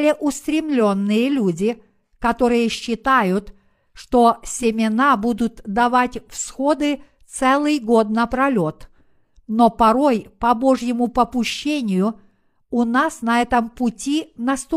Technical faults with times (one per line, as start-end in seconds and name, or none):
none